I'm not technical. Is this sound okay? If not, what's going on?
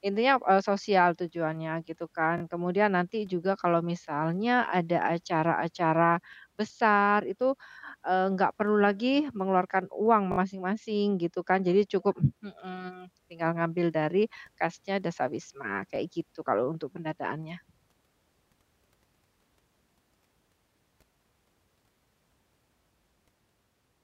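No. The speech has a repeated buffer fault at 2.38, 7.72, 10.32, 13.24 and 15.96 s. At each point a tiny slice of sound replays and gives a brief stutter, which fits a 20 ms buffer.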